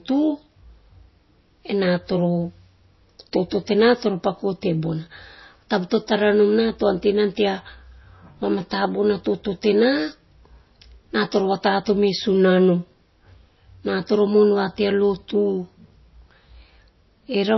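MP3 compression runs throughout. The speech has nothing above 5.8 kHz and a watery swirl, likely from an encoder starved of bits, around 24 kbps.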